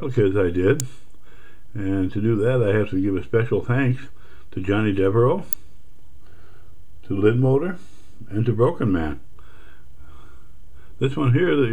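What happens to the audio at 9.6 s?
Nothing goes wrong at 9.6 s; the audio plays through that moment intact, with no dropout, click or distortion.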